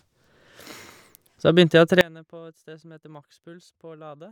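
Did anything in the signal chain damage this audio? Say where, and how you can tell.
Yes. At 2.01 s the speech drops out abruptly and never returns; from there to the end there's only a faint residue, very roughly 25 dB under the normal level. That's an audio dropout to a faint residue. It's a hard cut rather than a pause or a fade, and the chain after the break clearly stayed live, so the wanted signal was most likely lost upstream, at the analogue wiring or source connection, with only leakage still reaching the recorder.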